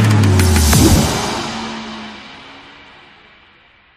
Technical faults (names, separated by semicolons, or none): none